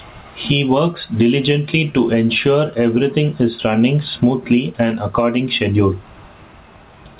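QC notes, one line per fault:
throughout, gain pumping: input gain likely far too high, so a fast limiter or compressor clamps down on each loud syllable and releases in pauses. The gain swings by around 15 dB, squashing loud and soft parts together.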